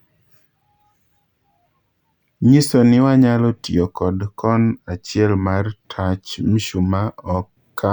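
Nothing goes wrong anywhere in this bit of speech, so there's no fault to point to at any moment.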